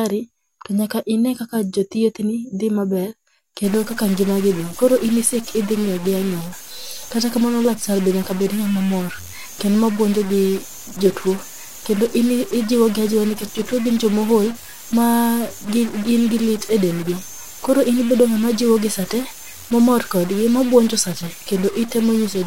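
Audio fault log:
3.64 s to the end, stuck bit: from this point the speech turns harsh and buzzy, and the pauses no longer fall silent but fill with a steady hiss-like noise. This is likely a single data bit held fixed, so about half of all samples are pushed off by that bit's weight, roughly -30 dBFS. On a waveform, quiet stretches show a band of rapid jumps the size of that bit's weight; a spectrogram shows broadband grit smeared across all frequencies, filling the gaps between syllables.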